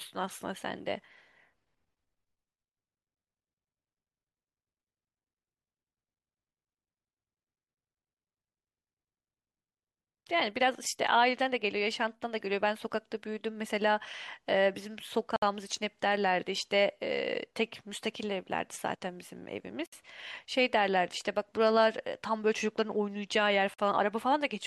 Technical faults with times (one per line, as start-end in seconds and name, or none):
15.36-15.42 gap at a join of encoded pieces
19.86-19.92 gap at a join of encoded pieces
23.74-23.79 gap at a join of encoded pieces